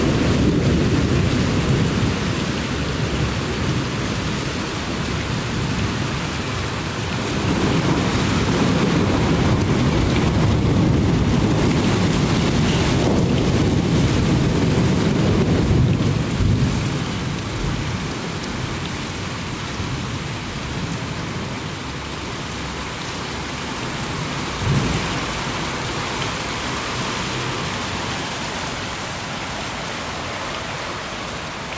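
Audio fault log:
Throughout, gain pumping: the input gain is likely set far too high for the microphone, so a fast limiter keeps hauling the level down whenever a loud sound arrives. The level ducks by around 10 dB under each loud event. Loud and quiet moments sit unnaturally close in level, and the audio sounds squashed within its call-style band, which stops at 8 kHz.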